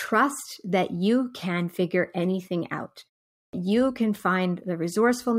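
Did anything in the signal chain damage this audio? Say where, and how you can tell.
Yes. At the playback stage, a clipped start after a pause: following a 0.42 s gap, the output device wakes late, swallowing about 100 ms from 3.43 to 3.53 s. On the waveform, speech begins abruptly with no onset; the spectrogram shows energy appearing abruptly, its first sounds absent.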